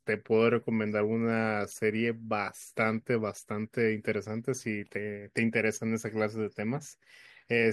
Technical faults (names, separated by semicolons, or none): none